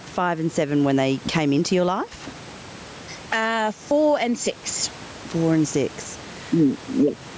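Throughout the speech, gain pumping pulls the level down on every loud sound, a swing of around 10 dB, so loud and soft parts end up closer in level and the sound is squashed. The likely cause is gain set far too high, with a fast limiter clamping down. Unlike a noise gate, it pulls loud sounds down rather than cutting quiet parts to silence.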